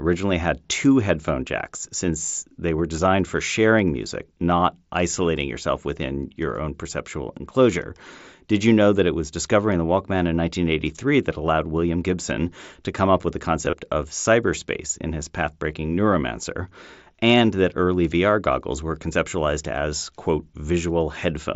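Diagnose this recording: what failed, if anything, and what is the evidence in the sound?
Concealed Bluetooth headset packet loss, 13.65 to 13.73 s, on the wireless link: about 30 ms went missing in gaps spread over 75 ms, the longest 22.5 ms. The receiver patched each gap by repeating matching recent waveform, producing a brief buzzy tone and small warble.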